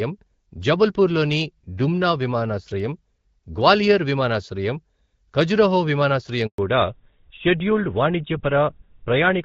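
At 6.46 s there's a handover gap: the call gets passed between networks and no speech frames make it through, so the voice dies out almost instantly and you get about 120 ms of dead air until 6.58 s. Whatever was said in that stretch is simply gone.

Right after, from 6.58 s to the end, there's a fallback to narrowband. Before the switch the clean, light-sounding HD Voice fits AMR-WB at around 12.65 kbit/s. Afterwards nothing above 4 kHz survives, which points to GSM full rate, so the speech turns duller and rougher.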